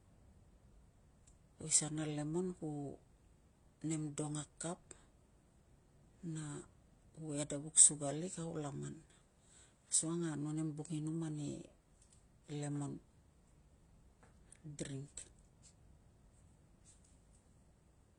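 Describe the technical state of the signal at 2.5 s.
At 2.5 s you're hearing a problem that runs through the whole clip: the speech sounds like it has been through transcoding between lossy codecs. Nothing comes through above about 10.8 kHz, and two sets of coding artefacts sit on top of each other. It's likely a low-rate AAC-LC encode later re-encoded to HE-AAC, with the second codec wasting bits reproducing the first one's smearing and adding its own, while the earlier cut-off stays put.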